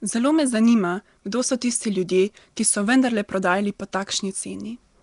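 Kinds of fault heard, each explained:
Nellymoser compression: the speech carries a hissy noise halo and underwater smearing, with nothing above 10.6 kHz, likely Nellymoser Asao; noise-filled bands rather than MP3-style swirl.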